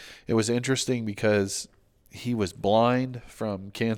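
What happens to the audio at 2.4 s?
Nothing goes wrong at 2.4 s; the speech runs through that moment intact, with no dropout, click, glitch or other fault.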